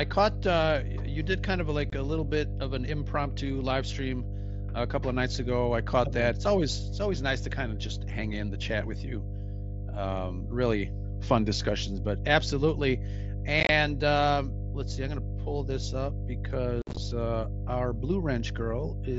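A steady, loud low drone at 50 Hz runs under the speech from start to finish, sitting not far below the voice itself. This is mains hum: a ground loop or nearby transformer leaking the power-line frequency into the signal path.

At 1.9 s, between "you did kind of" and "a little bit of", the speech drops out for about 23 ms with hard edges. At 13.6 s, after "fun discussions but absolutely" and before "um let's see I'm", it breaks into a rough, chopped patch over about 90 ms, with gaps no longer than about 23 ms each. At 16.82 s, just before "uh our", the choppiness is heavier, spread over about 150 ms with one gap of about 53 ms. These are unconcealed Bluetooth headset packet losses. Short voice packets between headset and phone never arrived, and silence or an idle pattern filled their slots with no smoothing. Over the wideband mSBC link, the speech around these holes keeps its 8 kHz bandwidth.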